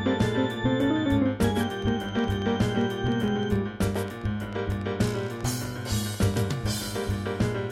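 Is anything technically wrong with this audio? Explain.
Yes. From 1.63 to 6.99 s, a train of clicks, likely from interference or a faulty connection, injects around 40 similar pulses at an irregular 7.3 per second, ticking about 5 dB louder than the sound itself.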